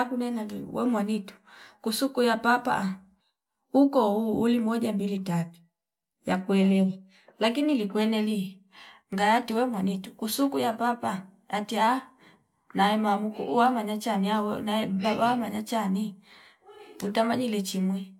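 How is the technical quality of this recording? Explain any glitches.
Nothing in the recording stood out as a technical problem on listening.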